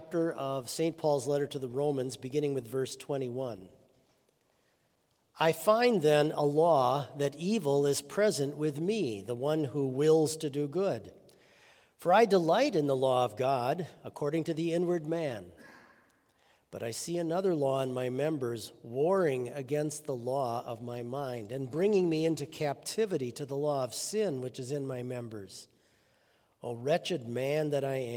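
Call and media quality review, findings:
Coarse, watery, muffled sound with dulled top end, 3.41 to 5.63 s and 20.6 to 22.65 s, each lasting about 2 s at its worst. Call bitrate drop. Falling bandwidth estimate made the Opus encoder code coarser and trim highs. Fits a fall from roughly 32 to 17 kbps.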